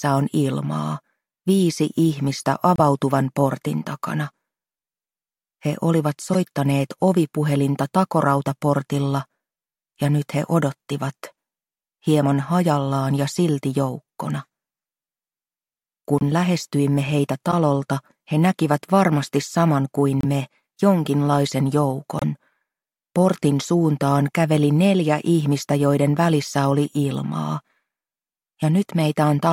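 Corrupt frames decoded at 2.76–2.80, 6.33–6.35, 8.47, 16.18–16.22, 17.51–17.53, 20.21–20.25 and 22.19–22.24 s. Bit-damaged compressed frames were played anyway, throwing energy into wrong frequencies as brief chirps or blips. The loudest, at 2.76 s, peaks around -5 dBFS. A spectrogram shows short vertical smears, and the waveform shows abrupt spikes.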